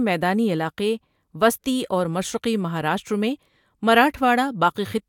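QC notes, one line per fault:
Nothing stood out on listening to this speech recording.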